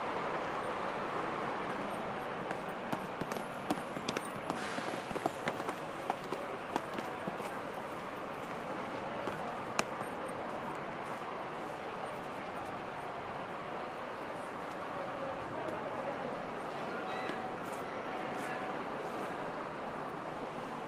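Nothing in this recording of everyday sounds stood out on listening.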